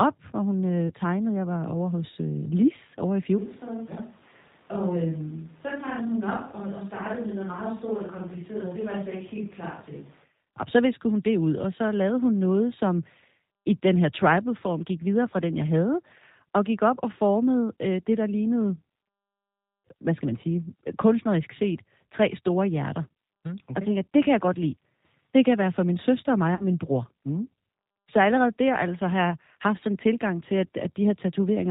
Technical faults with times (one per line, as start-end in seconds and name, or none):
0.00-31.71 G.729 codec
0.88-0.93 VoIP packet loss concealed by the speech codec
3.38-10.24 switch to a distant microphone
8.61-8.65 VoIP packet loss concealed by the speech codec
26.55-26.65 VoIP packet loss concealed by the speech codec